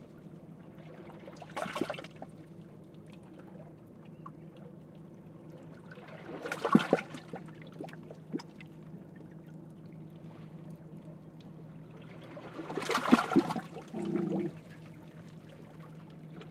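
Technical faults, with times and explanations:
No technical faults heard.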